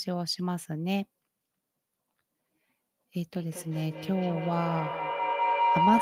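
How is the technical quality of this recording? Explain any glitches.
The recording has one serious fault, a feedback howl in the second half of this speech clip.

From 3.34 s to the end, a tone near 1 kHz swells to about 4 dB above the speech, pulsing roughly every fifth of a second. Two devices in the same room on the same call form a microphone-to-loudspeaker loop that gains level each pass.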